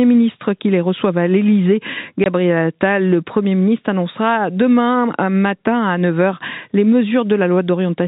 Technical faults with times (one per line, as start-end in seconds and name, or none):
2.24 packet loss filled with silence